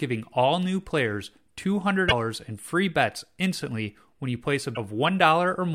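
At 2.05 to 2.12 s and 4.72 to 4.77 s, damaged data in the compressed stream makes the decoder lose frame sync, giving brief glitches.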